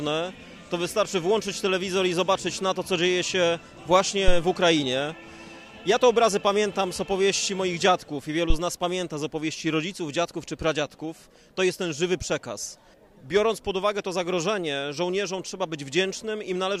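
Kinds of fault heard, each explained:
Phantom power thump: at 4.28 to 4.38 s and again at 8.50 to 8.57 s, a deep thump breaks into the sound, peaking at about -6 dBFS and then about -8 dBFS. Switching the mic supply on a live input puts a sudden DC step across the coupling capacitors, and it arrives as a low-frequency pulse. These two die away quickly, within 24 ms and 15 ms respectively.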